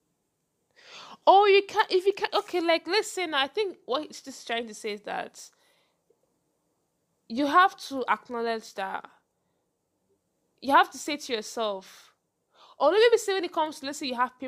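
A bit error spike lands at 13.66 s, just after "or maybe say when": a single flipped bit threw one sample off by a power of two before it snapped back, giving one sharp, broadband tick at about -33 dBFS, unrelated to the speech.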